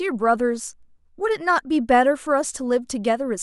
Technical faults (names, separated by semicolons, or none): none